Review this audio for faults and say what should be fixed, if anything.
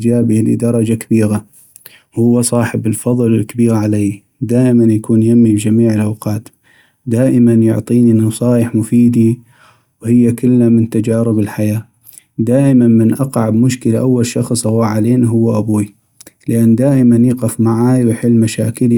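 No faults turned up in this audio, so nothing needs to be fixed.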